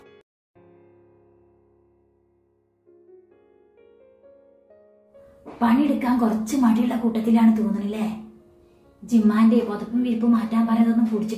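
No technical faults can be heard anywhere in the recording.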